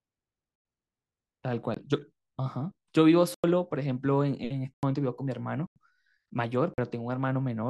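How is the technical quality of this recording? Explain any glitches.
The recording is marred by six blocks of digital silence in the speech, at 0.56, 1.74, 3.34, 4.74, 5.67 and 6.74 s. Four last about 93 ms, which fits 4096-sample buffers left unfilled in time. The others run about 21 and 45 ms. Each hole drops to silence with no fade. That abruptness separates it from a fading dropout or a concealed gap.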